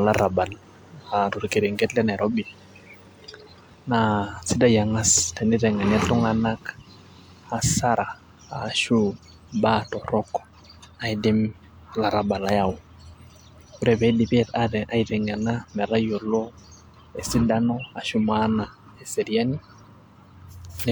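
No technical faults can be heard anywhere in the speech recording.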